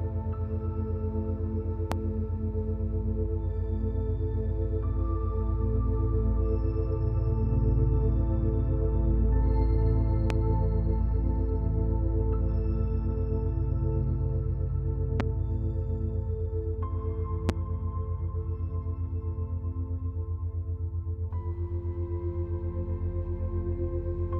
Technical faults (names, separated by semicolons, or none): loud pop